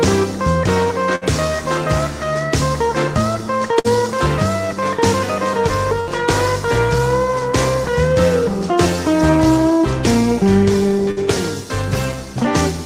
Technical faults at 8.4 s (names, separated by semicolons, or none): none